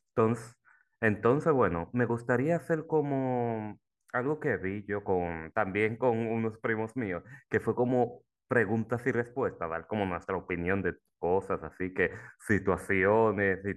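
No technical faults can be heard anywhere in the recording, and the speech signal stays steady and intact throughout.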